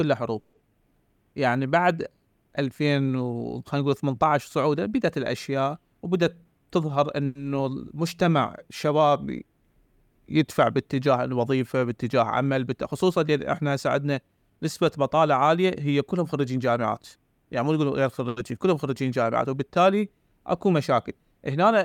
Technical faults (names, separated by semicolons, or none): call audio freeze; jitter buffer speed-up; short stall from a late packet